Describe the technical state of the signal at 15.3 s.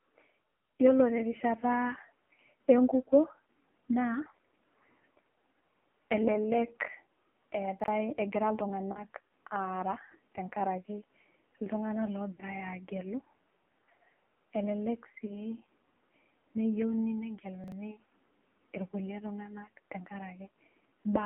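At 15.3 s the sound falls inside a lost AMR speech frame event, running from about 15.26 to 15.46 s. The decoder filled the gap by repeating the last good pitch and vocal tract settings at lowered gain, which fits a single lost 20 ms frame. It is heard as a brief dip or warble rather than the hard silent gap of a plain dropout, with the voice coming back weak or rough for a moment as the sound recovers.

Underneath, the AMR narrowband mobile codec shapes the whole passage. The audio is confined to about 200 Hz to 3.4 kHz and carries heavy buzzy, synthetic coloration, which points to a low AMR-NB mode near 6 kbps. That steady vocoder texture is present throughout, unlike the concealment warble, which is confined to this short span.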